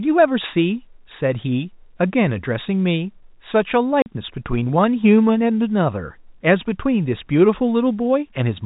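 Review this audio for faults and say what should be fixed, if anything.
Packet loss filled with silence cuts the speech from 4.02 to 4.06 s. The 40 ms hole fits two lost 20 ms packets, with hard edges instead of concealment's smeared repeat. Enabling packet loss concealment at the receiver, with a jitter buffer or redundancy, would prevent it.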